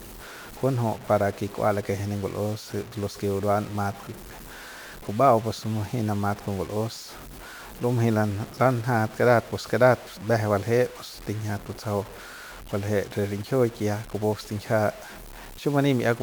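Speech here, and the whole thing has that gritty, grainy edge of low bit depth without dither, likely truncated to around 6 bits, so the error sits only about 20 dB under the speech and tails sputter out.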